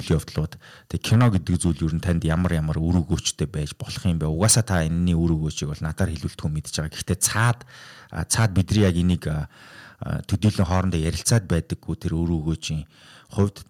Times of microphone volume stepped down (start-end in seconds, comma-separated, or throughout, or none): 1.16, 10.48